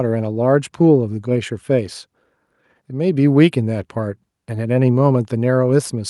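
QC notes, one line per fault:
Nothing to flag on this speech recording; it comes through fine all the way, with no faults to log.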